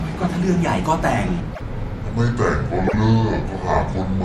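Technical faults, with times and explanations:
1.40 s to the end: section at the wrong speed. From here the speech drops to about 0.64 times its proper rate, so everything sounds dragged out and deep, roughly seven semitones low. Pitch and pace shift together at the same instant, which is what you get when playback runs off a slower clock than the recording did. The likely cause is an editor or player applying the wrong rate to this stretch.
1.53 s and 2.86 s: repeated frames. At each of these spots a block of about 52 ms plays a second time, so you hear a quick stutter where the same sliver of speech comes round again. That block length fits a couple of compressed frames being written or sent twice, and each repeat adds about 52 ms to the running time.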